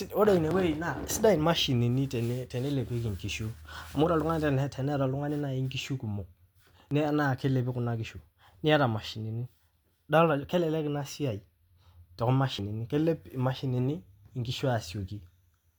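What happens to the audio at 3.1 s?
Nothing goes wrong at 3.1 s; the audio runs through that moment intact, with no dropout, click, distortion or other fault.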